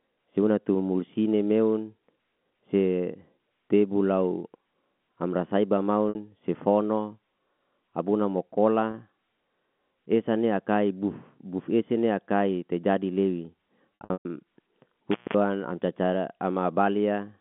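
At 6.09 s, just after "amra saiba", packet loss with pitch repetition fills a 60 ms gap (two lost packets, it seems) by looping the last pitch period. The result is a brief held, buzzy tone. At 8.91 s a 30 ms loss does the same.

From 14.0 to 14.3 s, after "akai te jadi lewi", the losses total 240 ms across 300 ms. The longest run, 120 ms, fades toward silence before a cross-fade back. A dropout in a loose connection sounds different: it has no repeated pitch.

From 15.11 to 15.34 s, just before "am carcare", an intermittent contact opens the line for about 200 ms. The sound cuts out with crackle at both edges and faint hiss in between, riding over the narrow 3.4 kHz telephone band.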